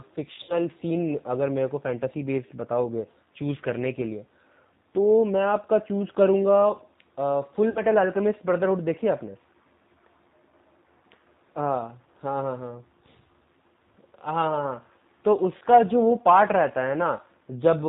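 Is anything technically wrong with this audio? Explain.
Yes. The whole clip sounds slightly rough and synthetic, with nothing above 4 kHz, the signature of the G.729 codec, here likely G.729A at around 8 kbit/s. It rebuilds speech from a vocal tract filter, a pitch predictor and a few pulses per 5 ms, so fine detail is plainly lost.

At 0.43 to 0.55 s and 7.70 to 7.80 s, about 60 ms of audio is lost, consistent with two missing packets, and at 15.58 to 15.63 s, about 30 ms. Each gap is VoIP packet loss concealed by the speech codec: the decoder extends its last pitch and filter at falling gain, giving a brief buzzy or noisy, fading smear that lingers as the frames recover.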